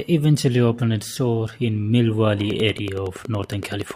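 From about 2.41 s to 3.92 s there's a train of clicks, around fifteen evenly spaced ticks at roughly 10.7 per second, poking a few dB above the speech. Same-shaped pulses at that steady rate likely come from nearby equipment interference or a faulty connection or power supply.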